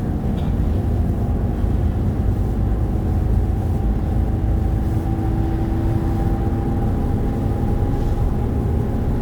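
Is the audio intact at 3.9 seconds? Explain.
No. Sample clock jitter runs through the whole clip, including 3.9 s: timing errors of around 10 microseconds misplace each sample, adding a hiss roughly 35 dB below the sound that rises with loud, bright passages. On a spectrogram it shows as a broadband noise floor tracking the signal's energy.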